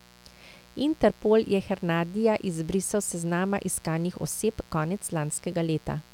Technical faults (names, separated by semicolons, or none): mains buzz